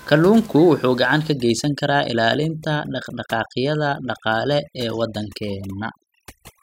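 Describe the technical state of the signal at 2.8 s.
At 2.8 s the signal is under overdone noise removal, running from 1.33 s to the end: bands near the noise estimate are gated away, leaving near-silent gaps with twinkling specks in the background.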